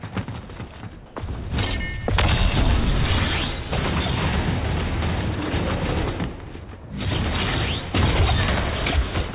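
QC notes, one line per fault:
1.06–1.16 s, comfort noise in place of the background: the sender likely stopped transmitting, so steady, featureless generated noise stands in for the background for 100 ms, at the same level.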